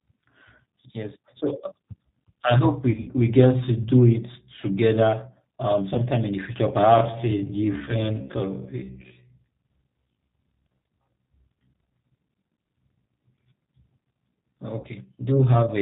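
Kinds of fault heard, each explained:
G.729 codec: the whole speech clip runs through an 8 kbit/s codec that rebuilds the voice from a filter, a pitch predictor and a few pulses per frame. It has a rough, slightly synthetic timbre with nothing above 4 kHz. Unlike plain low-bitrate band-limiting, the buzzy, model-made texture is constant rather than muffled.
VoIP packet loss concealed by the speech codec: short dropouts were filled by the decoder repeating its last pitch and filter at falling gain. This is clearest around 2.9 to 3.1 s after "I hope", with smaller patches near 5.94, 7.86 and 14.8 s. Each turns into a brief buzzy or noisy, fading smear rather than a silent gap or click.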